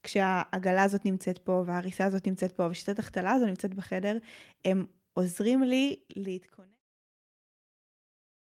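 Speech recording with no technical faults; the level eases down in a smooth fade-out beginning around 5.5 s and reaching silence at 6.81 s.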